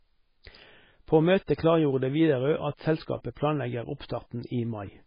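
Throughout, heavy MP3 compression leaves nothing above 5.1 kHz, with watery, swirling speech; a spectrogram shows a flat ceiling and flickering gaps, likely from a very low bitrate.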